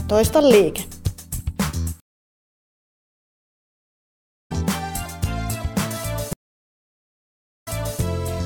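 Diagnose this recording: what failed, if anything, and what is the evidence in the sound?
The sound drops out twice. From 2.00 to 4.52 s there is 2.5 s of silence, and it comes back about three seconds further on, so material is skipped. From 6.33 to 8.00 s a 1.33 s gap ends with playback resuming 340 ms earlier, repeating a short stretch. This is a stream reconnect at the network stage: the connection broke, the player fell silent, then re-joined the stream with a fresh decoder at a different position.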